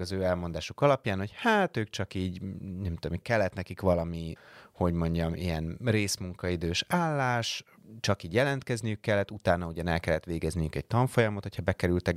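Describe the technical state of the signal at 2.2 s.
At 2.2 s the speech signal is intact, with no audible technical fault.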